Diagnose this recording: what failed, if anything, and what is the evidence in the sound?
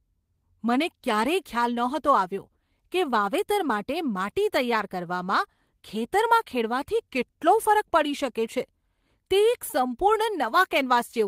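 Nothing in this speech recording points to a failure at any stage, so there's no fault to diagnose.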